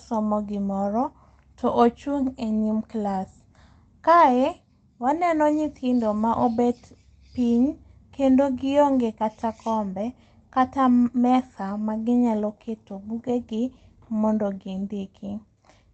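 The speech has no technical faults to report. It carries the usual coding texture of a call path, with the top end stopping around 8 kHz, which fits an Opus call at a moderate bitrate.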